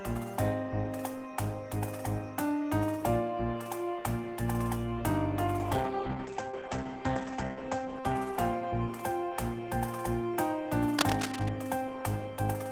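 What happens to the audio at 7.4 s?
At 7.4 s the sound turns muffled and rough, inside a call bitrate drop from 5.59 to 9.29 s. The encoder falls from 32 to 12 kbps and cuts the top from 20 kHz to 8 kHz.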